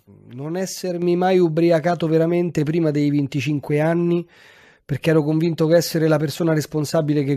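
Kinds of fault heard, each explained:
Microphone volume stepped up: the call software decided the mic was too quiet and bumped its input gain in one go, so at about 1.02 s the speech and the room noise both jump up by about 5 dB together, right before "mai ubriacato veramente prima".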